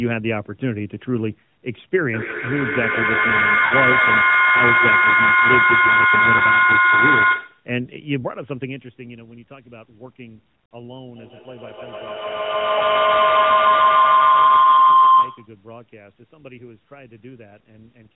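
A feedback howl starts at 2.13 s and runs to 7.76 s: another device in the same room is feeding the call's loudspeaker output back into its microphone, and the loop gains level on each pass. The repeats grow and narrow to a tone near 1.5 kHz, pulsing roughly every 150 ms, and peak about 8 dB above the speech. At 11.16 s a second feedback howl builds, settling near 1 kHz with the same roughly 150 ms pulse and peaking about 9 dB above the speech until it cuts off at 15.63 s.

Inside the first howl, lost AMR speech frames break the speech twice. Radio errors corrupted frames, and the AMR-NB decoder filled each gap by repeating the last good pitch and vocal tract settings at falling gain. From 3.66 to 3.75 s the sound smears and sinks for about 60 ms, which fits three consecutive lost 20 ms frames. At 6.38 to 6.42 s, and again at 12.78 to 12.81 s during the second howl, a single lost 20 ms frame leaves a brief dip and warble.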